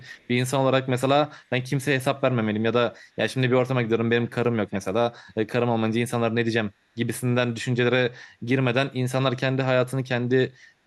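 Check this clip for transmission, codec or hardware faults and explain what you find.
Two faults are audible in this speech clip. From 0.00 to 0.28 s there is an echo leak. A faint copy of the speech returns about 0.40 s late, far below the main level. The likely cause is a far-end echo canceller letting loudspeaker pickup through. From 3.95 to 5.05 s the speech is suppressed in double talk. Both sides speak at once, so the echo canceller likely mistakes the talker for echo. The voice drops deeply, with about a second affected in total.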